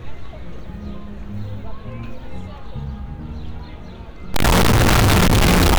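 From 4.34 s to the end at 5.79 s, the audio turns very loud and harsh. The waveform flattens into a near-square shape at an almost fixed, high level, and quiet background noise becomes as loud as the main sound. This is likely a float read as integer: 32-bit float samples interpreted as 32-bit integers.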